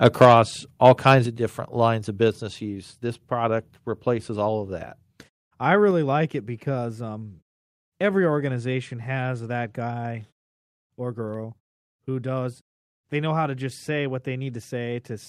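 Speech here, and right at the start there's microphone overload: the peaks from 0.05 to 0.33 s and 0.85 to 1.15 s are flattened and crackly, running about 5 dB and then about 4 dB past the converter's limit with a few percent of samples clipped, likely from the input gain being set too hot. You then hear the microphone volume stepped down in sudden drops at 0.25 s (about 3 dB), 1.26 s (about 6 dB) and 2.28 s (about 2 dB), each cutting voice and background together.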